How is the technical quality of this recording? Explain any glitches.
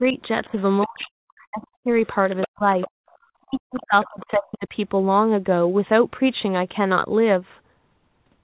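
The recording is narrowband call audio with nothing above 4 kHz, which fits a G.711 codec. The first five seconds carry several echo-canceller faults.

Speech suppressed in double talk occurs at 0.0–1.92 s, 2.46–2.87 s and 3.42–4.75 s. The speech dips or breaks up, dropping by as much as roughly 40 dB, likely because the echo canceller attenuated the talker while the far end was also speaking.

The other side's voice leaks through at 0.43–1.06 s, 1.64–3.16 s and 3.74–4.36 s. A second voice sits underneath, about 25 dB below the speech at first and rising to about 10 dB below around 2 s. This is likely loudspeaker echo that the canceller failed to remove.

The background is gated by the echo canceller at 2.96–3.1 s. The room sound drops by about 40 dB for roughly 150 ms as the canceller clamps the microphone, then returns when it releases.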